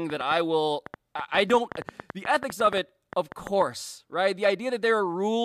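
A repeated pulse, likely from interference or a faulty connection, breaks into the speech from 0.10 to 3.63 s as a train of clicks. About 30 similar clicks arrive at an uneven pace near 6.8 per second, ticking well above the voice, pauses included.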